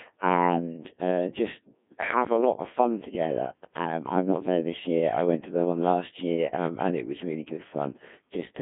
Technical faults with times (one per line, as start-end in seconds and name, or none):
0.00-8.61 Codec 2 vocoder